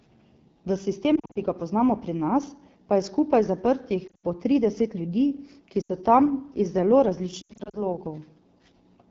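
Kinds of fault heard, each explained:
AMR wideband (HD Voice) codec: speech coded throughout at 8.85 kbit/s, sounding rough and raspy; spectrogram shows smeared harmonics and a noise-filled band above 6.4 kHz.
Lost AMR speech frames: four bursts of corrupted frames, for example just before "ki ga poznamo pri" and after "pa je skupaj zaprtih", give warbles and brief fades; waveform shows sagging, repeated segments.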